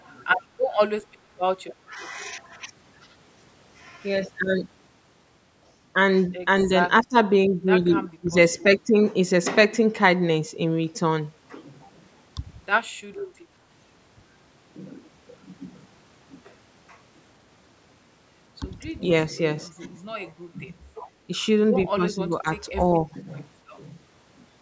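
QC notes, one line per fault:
0.00–0.15 s, 0.69–0.74 s and 13.17–13.24 s, echo leak: a faint copy of the speech trails the original by 198 ms, about 30 to 35 dB below it. It is likely loudspeaker pickup that the echo canceller did not fully remove.
1.88–1.99 s, 7.03–7.16 s, 8.20–8.65 s, 18.97–19.01 s and 21.93–23.27 s, speech suppressed in double talk: the speech level dips briefly, by around 5 dB at mildest and up to about 20 dB. The longest stretch is near the end. This is likely the canceller ducking the talker while the far side spoke.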